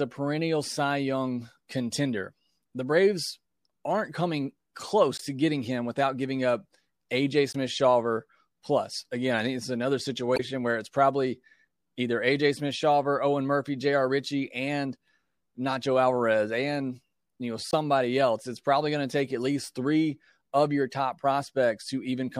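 Damaged data in the compressed speech stream makes the decoder misread frames, lose sync and hunt for the next valid header, leaving brief chirps or blips. This happens at 5.17 to 5.21 s, just before "to getting him without"; 7.53 to 7.56 s; 10.33 to 10.40 s, the longest, between "I think it's another" and "where it's probably either"; 17.71 to 17.74 s, after "and you know"; and 21.12 s.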